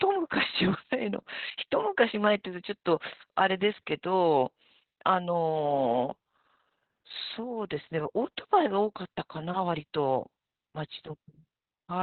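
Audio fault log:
Throughout: Opus voice compression. The speech is muffled and hoarse, with a slightly robotic edge, and nothing is heard above about 4.3 kHz. This fits narrowband SILK coding at a bitrate around 8 kbps. The band is cut and the excitation is coded coarsely.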